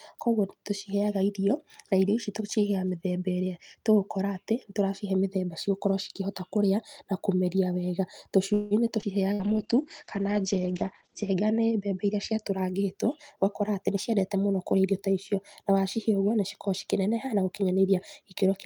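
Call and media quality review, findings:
Call audio freeze, 8.53–8.74 s: last sound held as a fading buzz for about 174 ms, then playback resumes where it stopped with nothing lost. Likely delayed packets draining the jitter buffer. Unlike a loss burst, no content is missing.

Skip ahead, 9.01–9.05 s: an abrupt forward jump with only about 15 ms of fill, roughly 70 ms of audio gone and the two sides joined almost directly. Audio was dropped in transit or by an overflowing jitter buffer while later audio was already queued. Unlike a freeze, there is no held sound.

Jitter buffer slow-down, 9.28–10.22 s: audio drawn out to 95% speed at unchanged pitch, with about 50 ms added by repeating pitch periods many times over. The buffer was rebuilding its reserve. Unlike a freeze, it stretches the audio gradually instead of stopping it.

Burst of packet loss, 9.33–9.42 s: a 58 ms concealment tail, the last sound held and fading down, then playback resumes 60 ms further on. 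Consecutive packets were lost and concealed. Unlike a freeze, the gap replaces content instead of delaying it.

Call bitrate drop, 9.41–12.49 s: rough, muffled sound as the encoder falls from 48 to 10 kbps and audio bandwidth narrows from 20 kHz to 8 kHz. It sits at the lowest rate for 1.9 s. A bandwidth-estimate fall in congestion control caused it. Timing and pitch stay intact.

Jitter buffer speed-up, 13.07–14.85 s: hurried delivery at 108% speed with pitch unchanged. Roughly 150 ms is trimmed in short pitch-period cuts to shed excess buffered delay. Unlike a skip ahead, the removal is spread out with no single audible jump.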